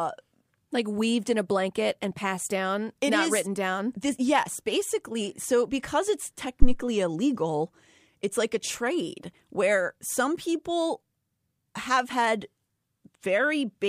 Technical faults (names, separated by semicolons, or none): phantom power thump